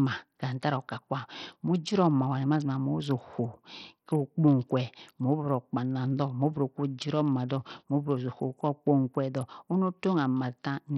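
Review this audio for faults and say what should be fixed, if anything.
Throughout the speech, the treble drops in and out and a gritty, grainy noise rides on the sound, with aliasing. This points to heavy Bluetooth SBC compression, likely from a link running a small bit pool, which fits a rate near 64 kbps. SBC splits the signal into a few wide sub-bands; when bits run short, the weak upper bands are starved or skipped and the rest are coarsely quantised. To prevent it, record over a wired connection, or set the Bluetooth link to a higher bit pool or a better codec.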